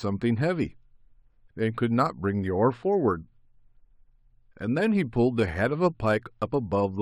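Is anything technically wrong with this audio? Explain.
Yes. Throughout the speech, sibilants carry a faint metallic shimmer. This is imaging from linear upsampling: straight-line interpolation from 12 kHz to 44.1 kHz left weak mirror images between 6 and 12 kHz.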